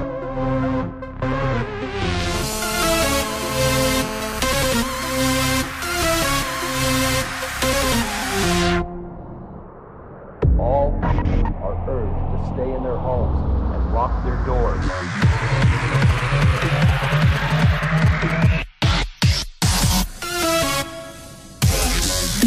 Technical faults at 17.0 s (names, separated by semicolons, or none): GSM signalling bursts